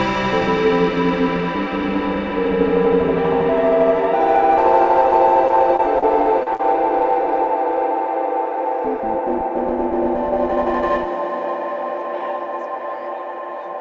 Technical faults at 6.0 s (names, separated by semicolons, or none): short concealed packet loss